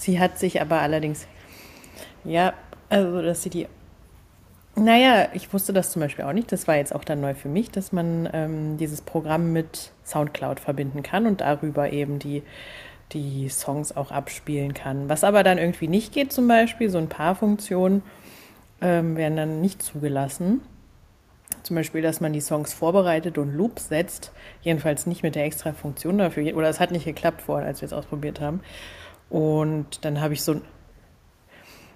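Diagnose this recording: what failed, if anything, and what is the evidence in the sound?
Echo leak, a call-processing fault: from 0.29 to 0.37 s and 1.08 to 1.47 s, a faint copy of the speech returns 194 ms late, roughly 35 to 40 dB down. It is likely residue a far-end echo canceller missed. Unlike reverberation, it is a discrete repeat at a fixed lag.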